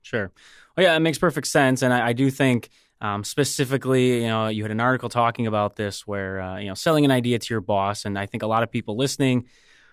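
No technical faults can be heard anywhere in the speech recording.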